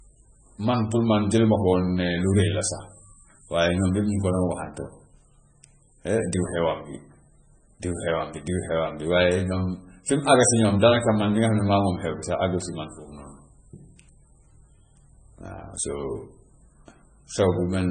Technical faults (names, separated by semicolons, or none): MP3 compression